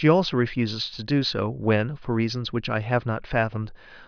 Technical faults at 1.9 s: none

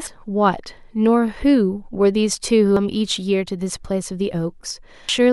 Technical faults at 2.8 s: damaged data in a compressed stream

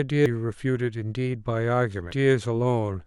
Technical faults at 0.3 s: damaged data in a compressed stream

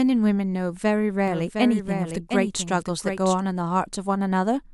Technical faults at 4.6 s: none

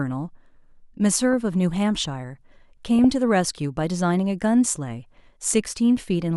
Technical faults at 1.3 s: DAB burbling

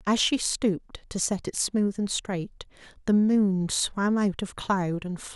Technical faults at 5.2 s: none

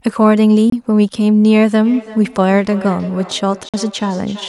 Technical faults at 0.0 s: none

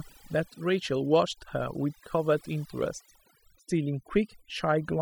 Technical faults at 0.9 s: overdone noise removal

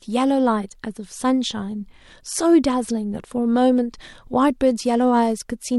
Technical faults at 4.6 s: Bluetooth SBC bit pool drop

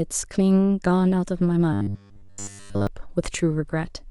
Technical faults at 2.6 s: robotic sound from repeated short buffers

